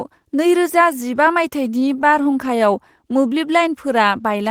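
Repeated stalls (stutter) run from 1.71 to 2.63 s. Packets arrived late, so the jitter buffer emptied eight times, and the receiver stretched the last sound through each wait of up to 12 ms. About 69 ms was filled and nothing lost, leaving brief hitches.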